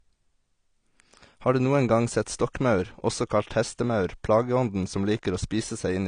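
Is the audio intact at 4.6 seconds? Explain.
No. Throughout, including 4.6 s, this is likely low-bitrate audio saved at a high bitrate. The re-encode can't restore what the first pass removed, so the speech stays dull, with nothing above 9.7 kHz.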